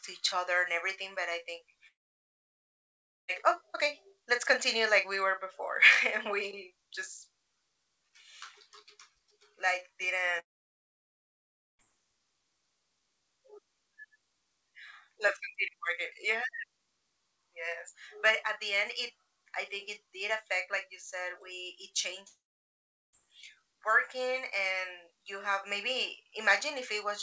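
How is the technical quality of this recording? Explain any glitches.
Three gaps break up this speech. It comes through a call codec that leaves nothing above 8 kHz. The gaps are likely long network dropouts. They fall at 1.88 to 3.30 s, after "I think", at 10.40 to 11.81 s, and at 22.28 to 23.27 s, after "you said we it". Audio stops arriving each time. The receiver stretches the last sound into a brief fading buzz, then near-silence. The first gap ends at "oh okay let's continue". The three gaps lose about 1.4 s, 1.4 s and 0.86 s.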